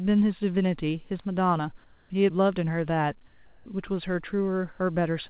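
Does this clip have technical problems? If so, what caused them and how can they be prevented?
Yes. Comfort noise in place of the background at 1.84 to 2.1 s and 3.28 to 3.66 s: the real background turns into steady, featureless hiss, about 2 dB quieter, then about 2 dB louder, likely because the sender paused transmission during silence and the receiver synthesised filler. Disabling discontinuous transmission (DTX) on the call prevents it.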